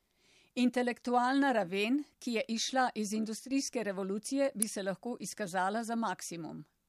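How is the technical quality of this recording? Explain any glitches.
Two brief technical glitches interrupt the speech.

From 3.39 to 3.51 s, after "ki je izšla iz", one channel drops out, likely a lost stereo channel, so the summed speech dips about 6 dB for roughly a tenth of a second.

At 4.62 s, just before "bi se lahko izkazala", an electrical switching spike, likely a nearby switch arcing into the audio line, adds a sharp snap.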